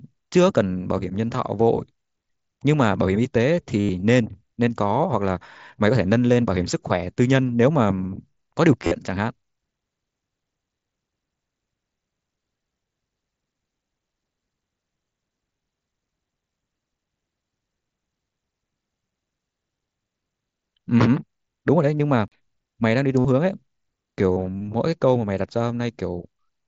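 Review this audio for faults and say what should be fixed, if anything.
Concealed Bluetooth headset packet loss at 3.80–3.89 s, 8.82–8.92 s, 21.97–22.00 s, 23.19–23.25 s and 24.32–24.36 s. Lost headset packets were filled by repeating recent waveform, giving buzzy held tones up to 90 ms. Keep the headset close to the phone, away from Wi-Fi interference.

CD skip at 22.28–22.32 s: a tick and a mute of a few tens of milliseconds, then the sound resumes from a different point on the disc. Clean the disc and isolate the player from knocks.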